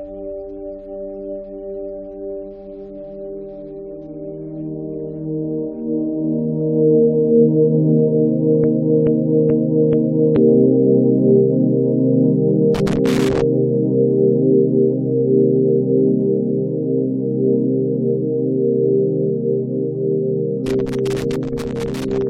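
Broken-record loop, 8.64 to 10.36 s: a 431 ms fragment repeats four times back to back, likely from a stalled player or stream resending its last buffer, and the audio for that span is lost. Loose connector crackle, 12.75 to 13.42 s and again 20.66 to 22.27 s: irregular bursts of scratchy crackle as a worn contact rapidly makes and breaks, chopping the signal.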